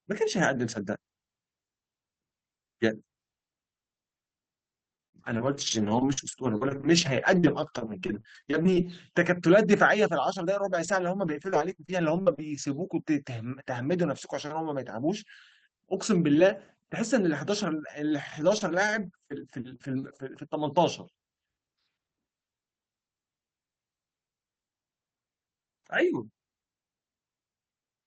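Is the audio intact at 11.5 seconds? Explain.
No. From 10.62 to 12.40 s there is repeated packet loss, giving a robotic sound. Five gaps, the longest 41 ms, are patched by stretching the preceding sound, so it turns choppy with pieces missing. On a spectrogram, harmonics smear into flat, repeated blocks between brief breaks.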